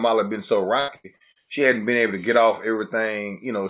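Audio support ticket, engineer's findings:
Choppy, robotic speech 0.8–1.39 s, right after "had been so". Repeated packet loss: four gaps, longest 80 ms, about 40% of the span filled by repeating prior audio. Spectrogram shows smeared, repeated frames; content above 4 kHz absent, consistent with G.711.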